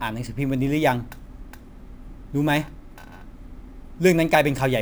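A gritty, inharmonic fizz runs under the speech from start to finish, rising with the louder and brighter sounds, such as sibilants, and sitting roughly 25 dB below the signal. The pattern fits a crude rate conversion from 32 kHz to 44.1 kHz, done by repeating the nearest existing sample instead of filtering. That staircase error recurs in a cycle set by the two rates, creating shifted, inharmonic copies of the voice.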